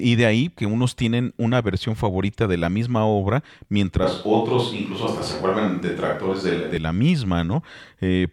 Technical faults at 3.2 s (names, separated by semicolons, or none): none